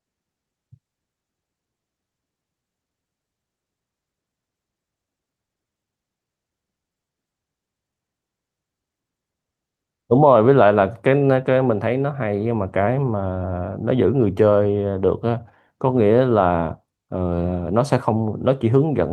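The speech recording shows no technical faults; the signal holds steady in continuity throughout.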